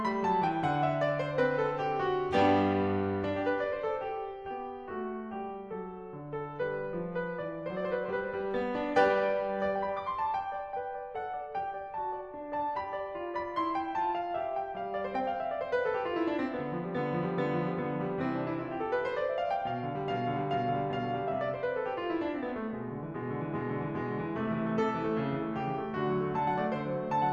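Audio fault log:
1.22–13.22 s: adaptive stream at a lower bitrate. The music switches abruptly, with no gap, to a much leaner rendition for 12 s and snaps back just as suddenly. Codec artefacts rise, which points to a drop from roughly 96 kbit/s AAC-LC to roughly 24 kbit/s HE-AAC. The player likely stepped down after the connection slowed, and HE-AAC rebuilds the upper band from the lower band instead of coding it.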